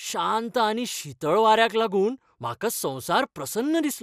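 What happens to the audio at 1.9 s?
At 1.9 s the speech carries the same MP2 compression damage heard across the whole clip. The sound is dulled, with nothing above 15.1 kHz, and has a gurgling, granular roughness. The likely cause is MPEG Layer II coding at a low rate, which fits around 80 kbps. Short of bits, the coder shuts off upper sub-bands that flicker in and out, and quantises the remaining bands coarsely.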